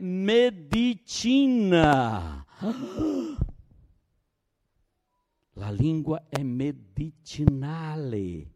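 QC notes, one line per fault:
0.73–0.76 s, 1.84–1.95 s, 6.35–6.38 s (just after "lingua è"), 7.48–7.50 s: loud pop. A sudden voltage pulse, likely from a switch, plug or static discharge, enters the chain and is shaped into sharp clicks roughly 15–20 dB above the speech, which continues underneath. The 1.84 s event is a double pop.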